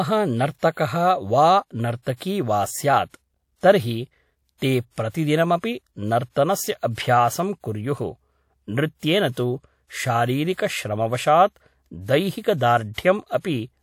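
At 0.72 s, pre-echo smears a sharp speech onset: a short hiss rises about 48 ms before the attack, which lands at 0.77 s sounding softened. The transform codec spread its quantisation noise across the whole block, so noise scaled for the loud attack also fills the quiet gap ahead of it. On a spectrogram this shows as a broadband haze before the onset's vertical edge. In the waveform, low-level grainy ripple precedes the first large peak.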